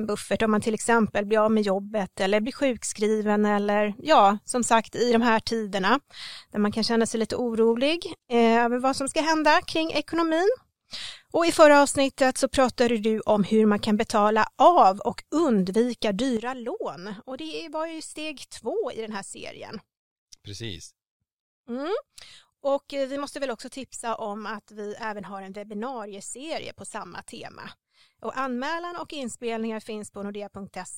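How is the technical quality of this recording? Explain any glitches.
The recording has one clear fault: a sudden gain jump partway through. At 16.37 s, right after "betala av och undvika", the level drops by about 10 dB in a single step and stays there to the end. The speech and the background noise fall together, with no fade between the two levels. That points to a digital gain change applied without a ramp, likely a level setting or bit shift taking effect instantly.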